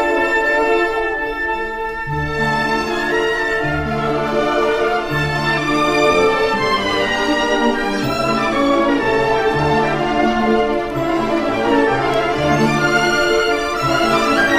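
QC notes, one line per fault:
Nothing stood out on listening.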